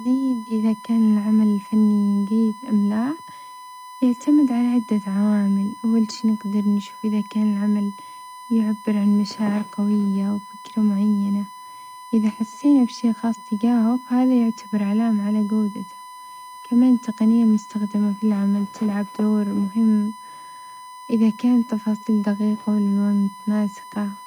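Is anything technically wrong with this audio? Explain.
Yes. Throughout the speech runs a steady, fixed-pitch whine at 1 kHz, sitting roughly 20 dB below the voice. This is USB whine: the bus pulls current in 1 ms frames, and that 1 kHz ripple leaks through shared power or ground into the audio path.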